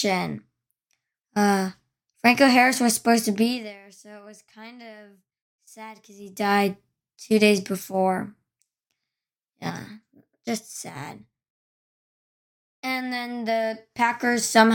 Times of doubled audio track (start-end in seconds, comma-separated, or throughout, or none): none